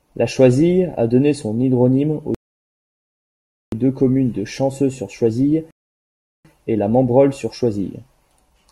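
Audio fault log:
2.35–3.72 s and 5.71–6.45 s, rebuffering stall. The speech cuts to silence, then resumes exactly where it stopped. Nothing is skipped. The player ran out of downloaded audio and waited for more, adding 1.38 s, then 0.74 s of dead air.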